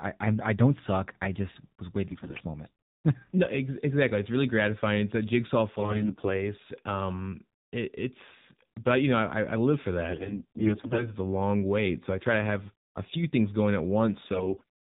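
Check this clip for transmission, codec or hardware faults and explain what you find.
Two faults are present in this speech clip.

AMR narrowband mobile codec, throughout. Nothing above 4 kHz survives. The sparse pulse model, which fits the 7.4 kbps mode, makes the voice audibly buzzy and synthetic.

AMR bit errors, at 2.10–2.41 s after "suck I just was", 5.74–6.36 s, 10.10–11.14 s between "I I live for" and "a long wait so", and 14.32–14.63 s after "few things going at". About a tenth of the weakly protected bits arrive flipped. The excitation pulses and fine parameters misplace, so pitch and level hold while the voice turns hoarse, scratchy and gargly.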